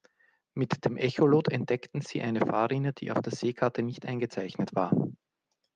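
No faults to report in this speech; the call path is working normally, its codec limiting the top end to 12 kHz.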